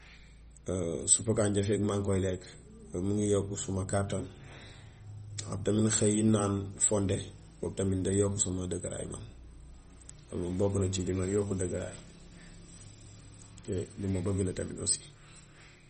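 From start to finish the speech carries plainly audible MP3 compression. Nothing is left above about 8.4 kHz, so the top end sounds dull. Weak frequency content flickers in and out between frames. That gives a watery, swirling texture. The likely cause is a low bitrate, around 32 kbps.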